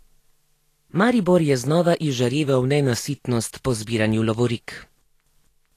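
Throughout, grainy treble hiss with nothing above 14.2 kHz points to likely Vorbis compression near 37 kbps. That noisy grit, rather than plain dullness, sets it apart from filtering. From 2.45 to 2.97 s, after "je znova", playback slows 5.9% and drops 105 cents, then snaps back. This is likely a drift correction step, unlike gradual wow.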